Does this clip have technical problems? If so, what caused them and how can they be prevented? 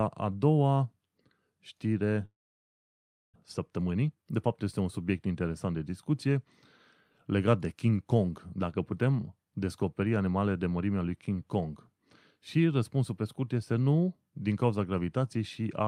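Yes. From 2.25 to 3.38 s there is a long network dropout. The last sound is drawn out into a fading buzz that gives way to silence, and the speech resumes with about a second missing rather than picking up where it stopped. That skipped content separates it from a natural pause. It was likely caused by packets that stopped arriving for about a second. Redundant or forward-error-corrected streams and a more stable network path help prevent it.

From 3.71 to 4.38 s a jitter buffer speed-up follows. The receiver trims short pitch-period pieces, around a tenth of a second in total, to shed the surplus delay after the outage. The speech runs at 112% speed, which sounds hurried. Because the pitch stays the same, this is not a sample-rate error. Gentler, slower buffer adaptation prevents it.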